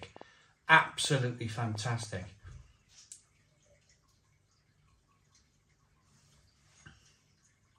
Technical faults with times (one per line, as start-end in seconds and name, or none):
0.03-2.04 train of clicks